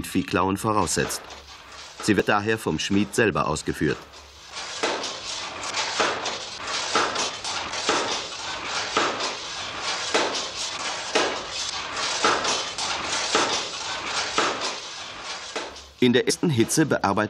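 Damaged data in the compressed stream makes the decoder misread frames and lose sync, producing brief glitches at 2.20–2.22 s, 7.28–7.30 s and 16.29–16.31 s.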